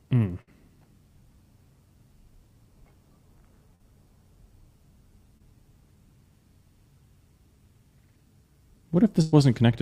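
At 0.41 to 0.49 s a burst of packet loss removes about 60 ms. The receiver extends the last sound and fades it, so the sound smears into a held, decaying tail before resuming further on, with that stretch absent. Short concealed packet loss follows at 3.75 to 3.81 s (about 40 ms) and 5.37 to 5.42 s (about 20 ms). Each gap is patched by continuing the preceding sound, then blending back, heard as a brief smear or wobble. A second burst at 9.22 to 9.34 s drops about 100 ms. The substitute is stretched across the whole gap without falling silent, then playback jumps ahead.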